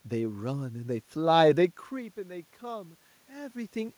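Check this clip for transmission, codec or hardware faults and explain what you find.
Nothing stood out on listening: the background noise belongs to the room, and the level changes near 1.5 s and again near 3.5 s sound like the talker shifting position relative to the microphone.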